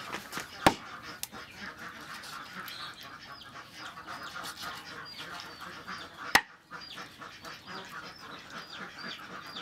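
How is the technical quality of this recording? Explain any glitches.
No glitches or dropouts can be heard anywhere here.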